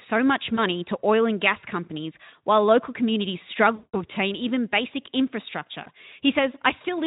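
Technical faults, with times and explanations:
0.55–0.66 s, 3.75–4.00 s and 5.83–5.87 s: VoIP packet loss concealed by the speech codec. About 20 ms, 180 ms and 20 ms of audio never arrived, so the Speex decoder extrapolated from its last pitch and filter while lowering the gain. The sound smears into a fading buzzy tone or coloured noise, longest at 3.75 s, and stays weak and rough briefly after packets resume.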